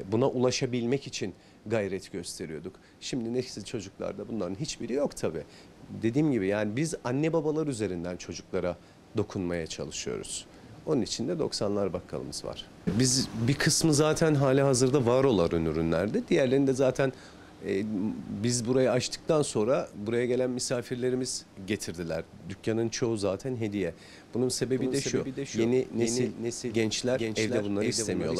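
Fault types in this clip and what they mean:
Doubled audio track: from 24.57 s to the end, a second full-band copy of the sound runs about 400 ms behind the original and roughly 5 dB quieter. It has no decay or room colour and enters abruptly. It is likely a second capture through a slower path, or two out-of-step copies left by an edit. On a spectrogram every onset and pattern reappears about 0.4 s later, fainter, and the waveform shows each transient repeated at that fixed offset.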